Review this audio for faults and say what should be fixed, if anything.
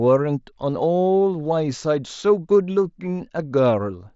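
Nothing stood out on listening to this speech, so there is nothing here that needs fixing.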